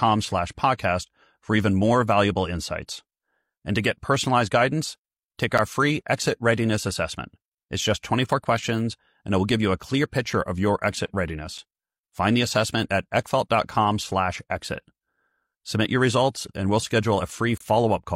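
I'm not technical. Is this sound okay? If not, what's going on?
No. There are three brief dropouts to silence, at about 5.58 s, 11.58 s and 17.58 to 17.60 s. Each is a gap between stream segments. The audio is delivered in chunks about 6 seconds long, and at each join the timing leaves a tiny hole that the player fills with silence. The first two last about 10 ms and the last about 28 ms, each with abrupt edges. Nothing is actually missing; the sound simply pauses.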